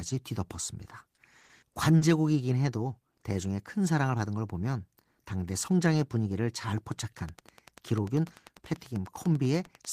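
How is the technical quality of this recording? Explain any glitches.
The recording has two clear problems: a cluster of dropouts early on and a steady ticking near the end.

Short concealed packet loss occurs at 1.15–1.19 s, 1.41–1.45 s, 1.45–1.51 s and 1.97–2.03 s. In each case 20 to 40 ms of speech arrived too late to decode. The receiver extended the preceding sound to cover the gap, giving brief smears or wobbles in the speech.

A train of clicks runs from 7.19 s to the end of the clip, at a regular 10.1 clicks per second. The peaks sit somewhat above the speech level. The clicks are audible over the voice and in the pauses. Interference from nearby equipment, a faulty connection or a power supply is the likely cause.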